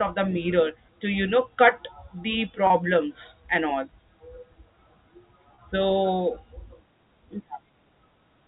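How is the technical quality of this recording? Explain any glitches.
The speech has two brief dropouts, at 2.67 to 2.70 s and 5.55 to 5.58 s. Both are packet loss with pitch repetition: about 30 ms of audio went missing each time, fitting one lost packet, and the receiver filled it by repeating the last pitch period, so each gap sounds like a momentarily held, buzzy tone. The narrowband sound of G.711 telephone coding can be heard throughout, with no energy above 4 kHz.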